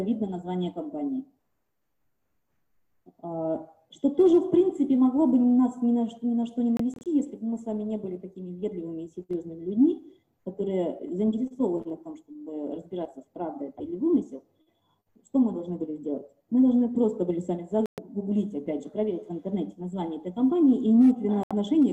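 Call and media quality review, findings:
Digital broadcast dropout, 6.77–7.06 s: scattered short mutes, about 96 ms lost across 288 ms, each no longer than 24 ms. Receiver muting frames that failed checksum. Waveform shows comb of flat gaps; spectrogram shows thin full-band vertical blank stripes. 17.86–17.98 s: 120 ms hole, clean blank column, audio lost. 21.43–21.51 s: 72 ms hole, same signature. Gap sizes fit 24 ms frame units.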